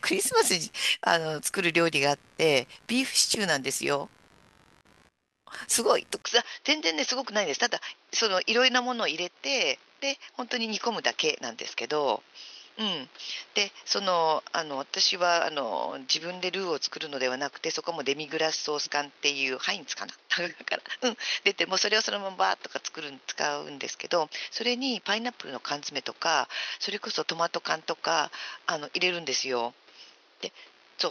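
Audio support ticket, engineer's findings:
Computer activity noise, whole clip: buzzy chirping pulses near 70 Hz, roughly 35 dB under the speech. Processor, graphics or mouse load modulating shared audio ground. Unlike steady mains hum, it fluctuates with machine activity, independent of the speech.

Input switched to a poorer device, 6.22 s to end: 20 ms dropout, then dull, boxy sound with nothing above 6.3 kHz, level down about 5 dB, new noise floor about 30 dB below speech. Likely a change of microphone or headset profile. Unlike an EQ or codec change, it arrives with a gap and its own noise.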